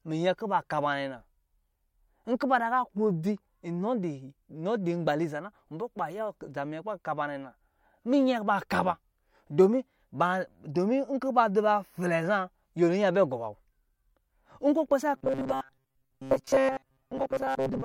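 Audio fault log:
15.17 to 17.85 s, robotic sound from repeated short buffers: The speech turns into a rigid, metallic buzz to the end of the clip. The buzz sits at a fixed 133 Hz, while the sound follows the original only roughly. The likely cause is new audio arriving too late, so the same short slice is replayed to fill gaps. A 133 Hz pitch fits a slice of about 7.5 ms. Most of the real audio in this stretch is skipped.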